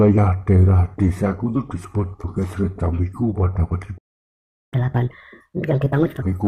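A playback stall runs from 3.97 s to 4.74 s: the sound breaks off in mid-flow and the output goes silent for about 0.74 s. This most likely happened because the player ran short of data or its thread was blocked, and sound resumes only once it recovers.

Catch-up at higher speed follows from 4.74 s to 6.22 s. The player resamples its built-up backlog to play at 1.5 times normal speed, which also raises pitch by roughly seven semitones, until the lost time is regained and playback returns to normal.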